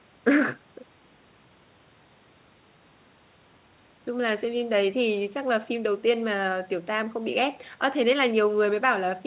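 No faults are heard in the speech; the call path sounds as expected, band-limited with nothing above 4 kHz, which fits a narrowband G.711 A-law link.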